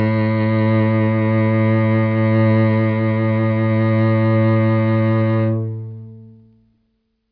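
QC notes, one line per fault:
No faults heard in this music clip.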